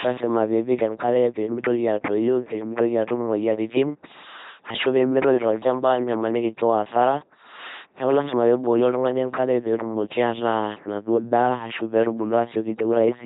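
Throughout the speech, the LPC-10 vocoder turns every stretch into either a buzzing pulse-driven tone or plain hiss through a ten-pole filter, giving a flat robotic quality with nothing above 3.9 kHz. Unlike ordinary low-bitrate codec smearing, the damage is heavy: misjudged voicing flips sound abruptly between buzz and noise.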